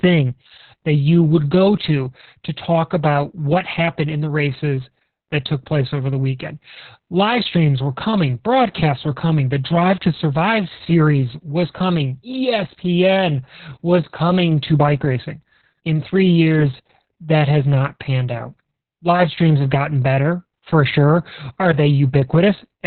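Speech throughout carries heavy Opus voice compression: muffled, hoarse and slightly robotic, with nothing above 4.3 kHz, which fits narrowband SILK near 6 kbps, unlike a plain low-pass filter.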